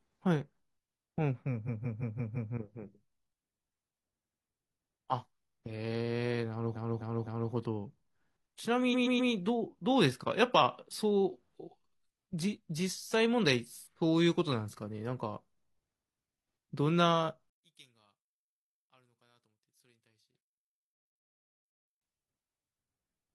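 Four bursts of repeated frames break up the speech early on. From 1.64 to 2.50 s a 170.7 ms block replays five extra times. From 4.20 to 4.37 s an 85.3 ms block replays twice. From 6.72 to 7.49 s a 256 ms block replays three times, and from 8.90 to 9.28 s a 128 ms block replays three times. Each block's length fits a short run of compressed frames being sent again. The repeats sound like a stutter. On a spectrogram they show as identical slices copied side by side. Together they stretch the audio by about 2.2 s.

From 17.50 to 22.01 s the speech almost disappears when the channels are summed to mono. The level drops by about 31 dB, and what remains is a faint residue. The likely cause is one channel inverted: reversed polarity on one side cancels everything the two channels share once they are added. The waveform collapses to a near-flat trace, and the spectrogram goes almost dark.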